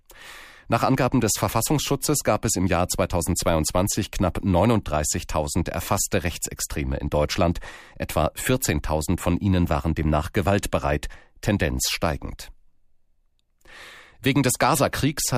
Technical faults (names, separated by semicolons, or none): none